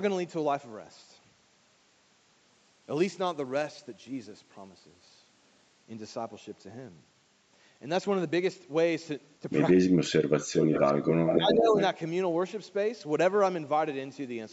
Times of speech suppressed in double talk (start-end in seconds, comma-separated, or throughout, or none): 9.81-10.53, 10.87-10.98, 11.38-11.78